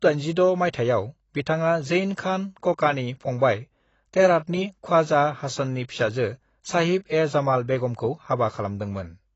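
Throughout, speech stops at 8 kHz and sounds dull and warbly, unlike clean filtering, likely AAC compression, fitting a bitrate around 24 kbps.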